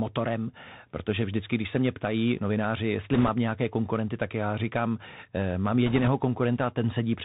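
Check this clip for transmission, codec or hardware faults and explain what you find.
The speech runs through a narrowband Bluetooth headset link for its whole length, and two short bursts of bit errors land on top of it.

The Bluetooth CVSD headset codec damage is plainly audible throughout. The codec sends one bit per sample, telling the decoder only whether to step up or down, with a step size that keeps adapting. That fits a 64 kbps CVSD stream. Nothing above 4 kHz survives, so a spectrogram shows a hard ceiling there. Sibilants come out scratchy, loud bright passages overrun the step and distort, and a fine granular hiss sits under the speech, visible as a grainy noise floor.

Bit errors on a Bluetooth voice link occur from 3.14 to 3.29 s, at a rate of around 5 percent, and again from 5.86 to 6.09 s, at a gentler rate of around 3 percent. Because no flipped bit outweighs the others and the error fades quickly, there are no sharp clicks, though each error grows with the speech level. 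What you hear instead is a rushing, crackly noise that is heavier in the first burst. On a spectrogram each burst appears as a band of broadband noise below 4 kHz, and the waveform shows thickened fuzz rather than spikes.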